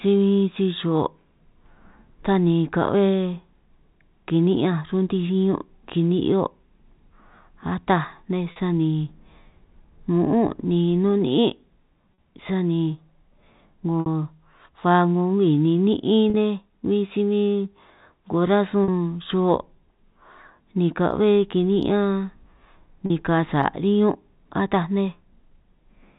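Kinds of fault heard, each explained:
Packet loss with pitch repetition: short gaps in the stream were bridged by repeating the last pitch period, giving brief held, slightly buzzy moments at 8.52, 12.14, 14.0, 16.3, 18.84 and 23.06 s, each about 40 ms, which fits two lost 20 ms packets, except the 60 ms one at 14.0 s, which fits three. On a spectrogram each shows frozen, evenly spaced harmonics; the waveform shows identical repeating cycles, all within the telephone-band sound below 4 kHz.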